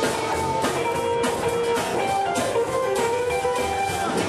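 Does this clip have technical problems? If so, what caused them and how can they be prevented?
Yes, there's one: a short burst of damaged data in a compressed stream, from about 1.32 to 1.37 s. It comes through as a quick chirp, squawk, click or short hole lasting roughly 40 ms. What's happening is that bytes in the encoded file got lost, zeroed or overwritten, so the decoder misreads those frames, loses its place, and has to hunt for the next valid frame header before it can carry on cleanly. To prevent it, transfer and store the file over a checksummed, error-checked path and verify the checksum before decoding.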